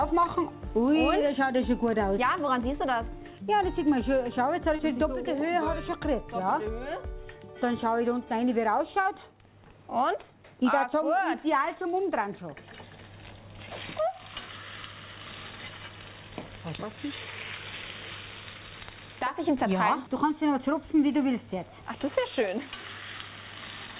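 At 4.76 s and again at 9.02 s, about 30 ms of audio failed to arrive in time and the receiver covered each hole with short concealed packet loss, extending the preceding sound for roughly 26 ms and 33 ms before crossfading back. Each is heard as a brief smear or wobble. On a spectrogram, there is no content above 4 kHz, which fits the G.711 A-law call path.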